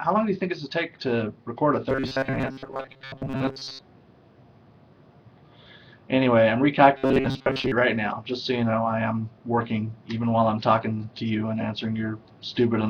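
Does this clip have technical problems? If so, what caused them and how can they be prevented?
Yes. From 1.89 to 3.81 s and 6.98 to 7.72 s there's robotic sound from repeated short buffers, a stiff metallic 134 Hz buzz, likely because audio arrived too seldom and a roughly 7.5 ms chunk looped through most of each stretch. Larger buffers or lighter CPU load prevent it.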